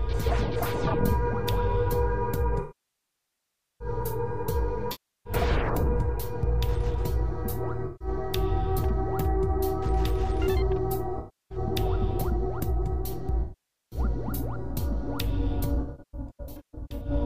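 AAC frame loss with concealment occurs six times: the decoder lost runs of frames and filled each gap from the last good spectrum, fading it down as the gap lengthened. The longest loss, 2.61 to 3.88 s (about 1.2 s), decays toward silence and fades back in. Shorter losses at 4.91–5.33 s, 7.86–8.08 s, 11.18–11.58 s and 13.43–13.99 s sound like smeared, phasey patches. From 15.75 to 17.1 s, scattered drops, none much over 150 ms, leave a smeared, noisy stretch.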